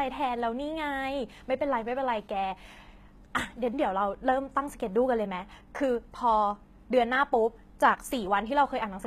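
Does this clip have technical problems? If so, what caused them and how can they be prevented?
Yes. Throughout the speech the treble has a gritty, metallic quality, and s sounds come out lispy, with nothing at all above 14.9 kHz. This is likely HE-AAC compression, at a rate consistent with around 20 kbps: the upper band is rebuilt from copied lower bands rather than coded, so the harmonics don't line up. Ordinary low-bitrate AAC or MP3 would sound dull and muffled instead, whereas here the top stays bright but false. To prevent it, encode at a higher bitrate with plain AAC or Opus.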